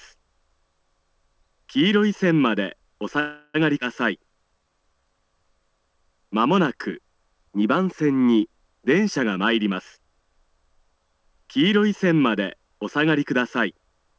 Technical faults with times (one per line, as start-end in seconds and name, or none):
3.20-3.56 call audio freeze
3.80-3.83 skip ahead
4.18-5.02 jitter buffer slow-down
9.23-10.22 jitter buffer speed-up